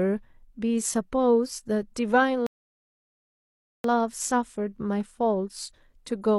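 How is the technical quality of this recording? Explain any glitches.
The recording has one clear glitch, a rebuffering stall. From 2.47 to 3.84 s the speech cuts to silence for about 1.38 s because playback ran out of downloaded audio and waited for more. Unlike a dropout, nothing is skipped: the speech resumes exactly where it stopped, so time is added.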